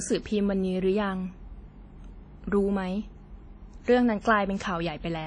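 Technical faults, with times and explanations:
Throughout, WMA compression: nothing above 10.1 kHz, with ringing, washy speech and hiss that breathes. Likely long-block transform coding, fitting a bitrate near 32 kbps.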